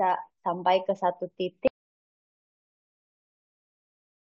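A speech recording that suffers an audio dropout to silence from 1.68 s through to the end: the voice cuts off mid-flow and digital silence follows, with no room tone at all. The waveform collapses to a flat line and the spectrogram goes blank, likely from a lost input or stray mute.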